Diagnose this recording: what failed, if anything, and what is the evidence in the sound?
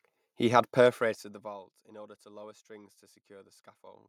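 No fault found in recording.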